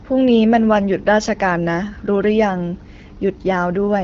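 A short speech clip with no technical fault to report. It carries the light coding of the AMR wideband (HD Voice) codec, with the band limit and clarity that fit a rate of about 12.65 kbit/s.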